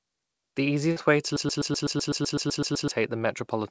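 At 0.92 to 0.98 s, just before "way to", short concealed packet loss: about 40 ms of audio arrived too late, so the receiver extended the previous sound, leaving a brief smear. From 1.37 to 2.91 s, right after "way to", a broken-record loop: the stream likely stalled and resent its last 126 ms fragment twelve times back to back, losing what should have played, all within the G.722 band that stops at 8 kHz.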